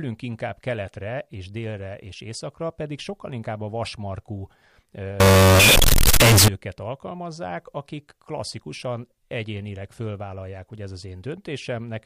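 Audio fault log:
5.20–6.48 s, float read as integer: speech turns loud, harsh and nearly square before "alkalmazzák akik klasszikusan egyénileg", likely 32-bit float samples read as 32-bit integers.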